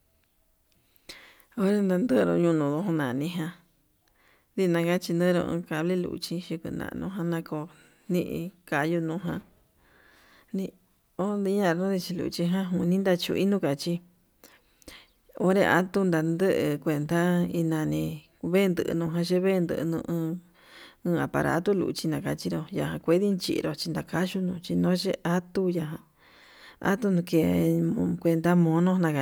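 A speech recording, and there's nothing technically wrong to point out here, with no faults turning up anywhere in it.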